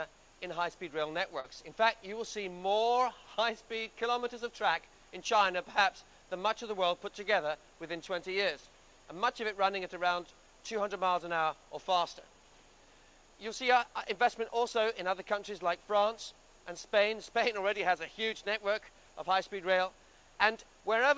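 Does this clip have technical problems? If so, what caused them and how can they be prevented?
Yes. Short concealed packet loss, 1.40 to 1.46 s: 40 ms never arrived in time, so the receiver extended the preceding sound and blended back, leaving a brief smear. A steadier network connection or a deeper jitter buffer would help the packets arrive before playback needs them.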